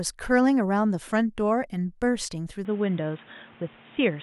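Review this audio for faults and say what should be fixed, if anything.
From 2.65 s to the end at 4.23 s, the speech abruptly turns dull and boxy, losing everything above 3.8 kHz, with fresh background noise but unchanged level: likely an input switched to a poorer device. Lock the recording input to one microphone so the system cannot change devices mid-take.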